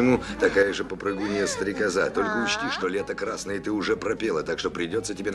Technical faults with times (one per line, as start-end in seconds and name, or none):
0.63-5.34 one channel drops out